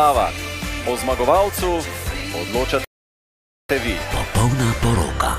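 The player likely ran short of data at 2.85 s, a playback stall: the sound drops to silence for 0.85 s, resuming at 3.69 s.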